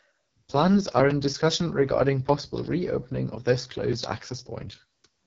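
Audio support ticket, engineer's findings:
AMR wideband (HD Voice) codec, whole clip: speech rough and raspy, band capped near 7 kHz, 6.4–7 kHz top filled with noise-like hiss. Heavy roughness fits the lowest AMR-WB mode, about 6.6 kbit/s. Constant, unlike bursty packet-loss concealment.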